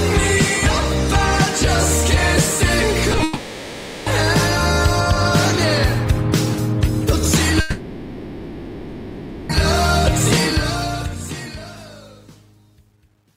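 Right around 3.1 seconds the audio starts to misbehave. There are two quick smears, at 3.12–3.14 s and again at 3.18–3.20 s, that are short concealed packet loss. In each case about 10 ms of the stream showed up too late, and the decoder papered over it by extending what it had just played before blending back in. You hear a tiny wobble rather than a clean gap. Then at 3.23 s things get worse. Everything up to 4.07 s, about 0.83 s, sounds like a long network dropout, likely a burst of lost packets. The receiver fills the whole stretch with a continuation of the last sound that decays into a buzzy, hissy tail instead of real content, and when the audio resumes it has skipped ahead, so that portion is simply gone. The same thing happens again from 7.60 s to 9.50 s, roughly 1.89 s this time, which makes the synthetic fill stretch out noticeably longer before real audio picks up again. The ending has a separate problem. 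A smooth fade-out begins around 10.4 s, and from 10.42 s to the end it carries truncation distortion on a fade. The level stage is keeping only about 10 bits with no dither, so as the signal drops toward the bottom step the waveform turns blocky. From about 11.95 s onward the tail sounds gritty rather than trailing away cleanly.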